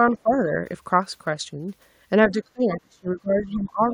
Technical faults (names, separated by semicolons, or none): speech suppressed in double talk